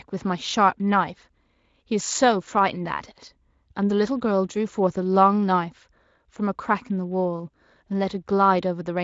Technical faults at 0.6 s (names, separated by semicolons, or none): none